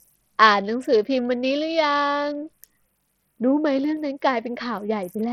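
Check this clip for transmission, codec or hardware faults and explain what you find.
One fault runs through the whole speech clip: Bluetooth SBC compression, likely the cause of the heavy damage heard from start to finish. Starved of bits at a rate that fits a link near 64 kbps, the encoder gives the upper sub-bands little or nothing and coarsely quantises the rest, so treble flickers and drops out while gritty noise and aliasing ride on the speech.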